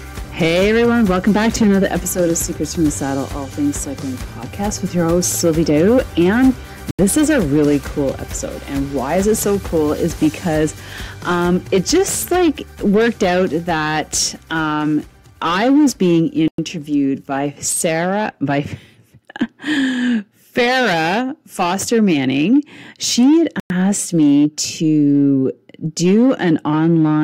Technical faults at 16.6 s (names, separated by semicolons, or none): Bluetooth stall